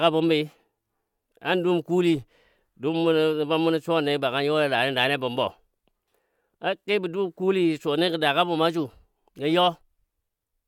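No technical faults are audible.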